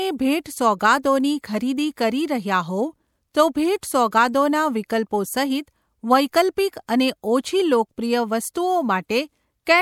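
At 3.81 s and again at 8.54 s, pre-echo smears a sharp speech onset. The codec spread quantisation noise across a whole transform block, so a short hiss leaks in about 18 ms and 13 ms ahead of each attack. Unlike an echo, the smear comes before the sound.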